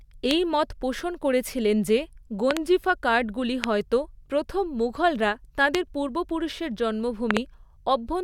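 Stray voltage pulses, likely from a plug, switch or static discharge, enter the signal. They cause a loud pop, far louder than the speech, at 0.31–0.33, 3.64–3.66 and 5.75–5.77 s, and double pops at 2.51–2.59 and 7.31–7.39 s. The speech continues underneath.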